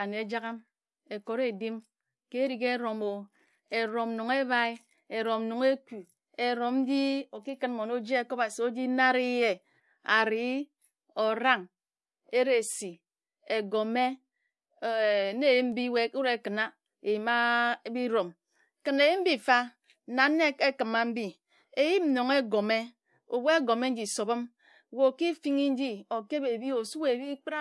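Nothing here stands out as a technical problem: it's a speech recording, and there's no audible fault anywhere in it to point to.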